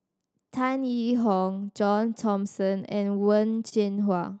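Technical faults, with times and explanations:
0 to end (throughout), clock drift between sender and receiver: The sender's audio clock runs roughly 2 percent slower than the receiver's. The jitter buffer keeps draining, so the receiver must keep padding the speech, leaving small, unevenly spaced timing hiccups across the clip.
0.15–3.16 s, repeated timing corrections: To stay in step with the slow sender, the receiver keeps repeating short pieces of the Opus-decoded stream. This stretch plays at 99% speed with around 50 ms added in total, so the speech is faintly drawn out.
3.69–3.75 s, short stall from a late packet: A packet arrived late and the jitter buffer ran empty, so the receiver stretched the last sound for 29 ms until it came, then carried on from the same place. Nothing is lost, but one sound lingers with a slight buzz or dip, and playback runs 29 ms later afterwards.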